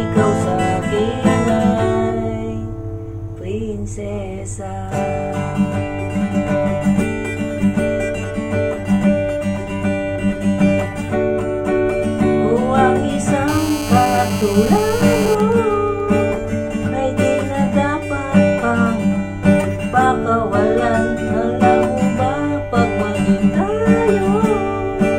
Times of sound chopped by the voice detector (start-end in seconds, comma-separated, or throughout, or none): none